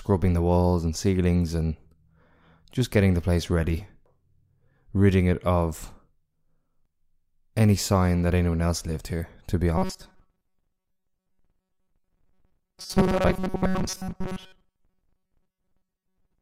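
From 9.78 s, after "lived here to be", speech becomes a metallic 188 Hz buzz to the end: robotic sound, likely from a repeated 5.3 ms buffer.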